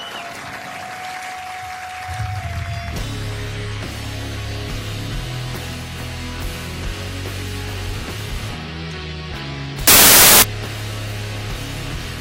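From 9.87 to 10.42 s the audio turns into loud, harsh broadband noise: samples built from the wrong bytes, where misaligned or swapped bytes push the fast-changing low bits into the top of each value. Unlike a brief noise burst or clipping, it lasts for 0.55 s.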